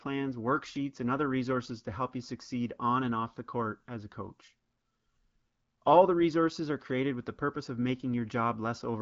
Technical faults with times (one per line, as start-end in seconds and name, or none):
none